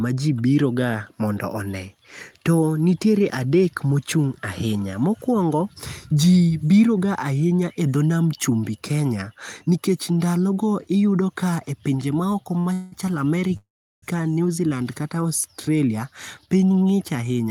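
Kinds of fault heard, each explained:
Short stall from a late packet: one packet turned up late at 12.59 s, so the receiver held the last bit of speech for about 57 ms until it arrived, then carried on from the same spot. Nothing is lost, the sound just drags briefly.
Call audio freeze: twice the speech stops moving and the last sound gets drawn out, likely because packets were held up in transit and the jitter buffer ran dry. At 12.73 s that's about 190 ms of buzzy fill. From 13.57 to 14.04 s it lasts about 457 ms and fades to silence for most of it. Afterwards the speech picks up where it stopped.
Jitter buffer speed-up: from 16.39 s to the end, the receiver trims out lots of tiny pitch-period slices to work off the delay built up earlier, roughly 150 ms in all. Speech runs at about 111% speed with no change in pitch, so it sounds a touch hurried.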